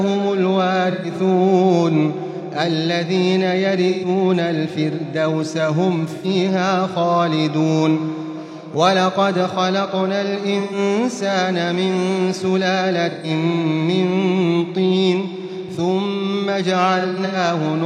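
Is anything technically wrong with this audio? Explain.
Yes. AAC frame loss with concealment occurs at 0.91–1.10 s, 3.89–4.08 s, 6.15–6.26 s, 10.59–10.78 s, 13.11–13.30 s and 16.99–17.36 s. Runs of coded frames went missing, so the decoder rebuilt those stretches from the last good spectrum, roughly 128 ms at most of them, with 85 ms at 6.15 s. Each gap becomes a short smeared, noisy or phasey patch. The last one spreads about 213 ms of loss across 0.34 s, the longest run around a tenth of a second.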